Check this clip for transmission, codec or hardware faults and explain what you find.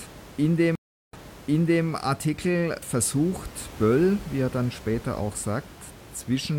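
There's one clear transmission fault: a stream reconnect between 0.75 and 1.85 s. The connection drops and the player goes silent for roughly 0.38 s. It then reconnects and spins up a fresh decoder mid-stream. Because the server resends a burst of buffered audio, the speech picks up about 0.72 s earlier than where it cut off, so you hear a short stretch repeated. The first frame or so comes in muted or faded up as the new decoder settles. The room noise sitting about 19 dB under the speech belongs to the recording, not the link.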